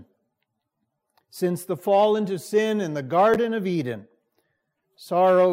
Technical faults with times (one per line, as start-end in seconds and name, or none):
3.34-3.36 chunks out of order